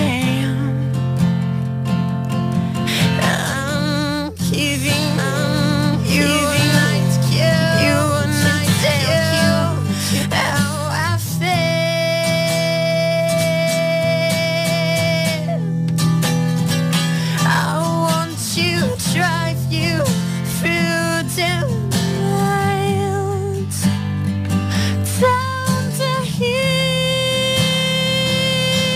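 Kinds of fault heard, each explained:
Doubled audio track: most likely a second, slower capture path or a misaligned edit is feeding the same material into the mix twice. From 5.18 s to 10.22 s, a full-band copy trails the original by about a second and a half at roughly equal loudness, so every event is heard again as a distinct repeat rather than a blur. The copy carries no decay or room colour, and it switches on and off abruptly at both ends.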